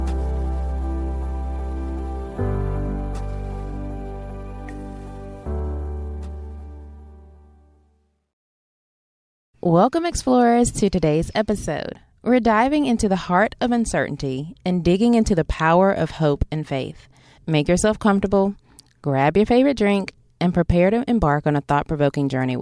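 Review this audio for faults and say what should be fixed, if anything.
No faults found; nothing needs fixing.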